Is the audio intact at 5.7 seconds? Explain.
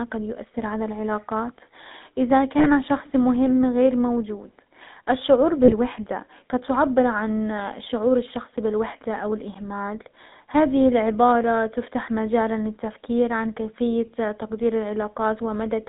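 No. Just after "مهم غير موجود الشعور", from 5.64 to 5.72 s, there are lost GSM frames. About 40 ms of the signal, consistent with two 20 ms frames, never arrived intact. The decoder covered the gap by reusing the parameters of the last good frame, so the sound briefly holds on a rough, metallic ring instead of continuing naturally. The gap is too short to fade fully to silence.

The GSM full-rate codec also runs through the whole clip, including this point. This 13 kbit/s coder models the vocal tract and drives it with a sparse, regularly spaced pulse excitation. The line band is limited to about 150 Hz to 3.7 kHz, and the speech has a plainly audible buzzy, gravelly roughness.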